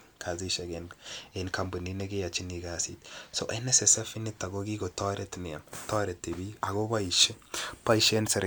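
There are no technical faults to describe in this speech recording.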